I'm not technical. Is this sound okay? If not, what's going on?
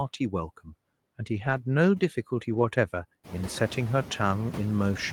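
No. Two things are wrong with it.

The first runs through the whole clip: noise suppressor artifacts. A cleanup feature tries to remove steady background hiss. It pushes the noise down hard between words, then lets it come back under them. So the background seems to breathe in and out. What remains of it can flutter or warble. The speech can sound a bit thin or watery. The room's own background noise gets louder from around 3 seconds, which makes this pumping easier to notice.

The second happens twice: lost packet rebuilt from error correction. Small chunks of the audio went missing on the way. Each following chunk carried a rough backup copy, and that copy was played instead. So nothing drops out, but those moments sound grainier and noisier. It happens from 1.33 to 1.55 seconds, about 120 milliseconds of patched sound. It happens again from 2.53 to 2.63 seconds, about 60 milliseconds.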